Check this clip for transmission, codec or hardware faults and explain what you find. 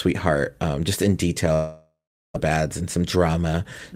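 Two transmission faults show up here, both from about 1.5 s into the speech onward.

From 1.53 to 2.38 s, right after "um just in", the sound smears into a fading buzz, then goes near-silent. That's likely a long network dropout, with about 0.6 s lost outright.

From 2.49 to 3.87 s there's a jitter buffer speed-up. Playback runs about 10% fast at normal pitch, trimming around 150 ms of backlog in tiny pitch-period cuts. It sounds hurried.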